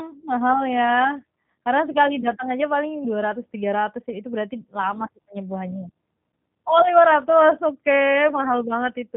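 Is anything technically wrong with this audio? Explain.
Yes. G.729 codec damage runs throughout this speech, which sounds like 8 kbit/s G.729A. Each 10 ms frame is rebuilt from a vocal tract model, pitch prediction and a few pulses. Being a narrowband codec, it passes nothing above 3.8 kHz, and the speech sounds roughened and synthetic.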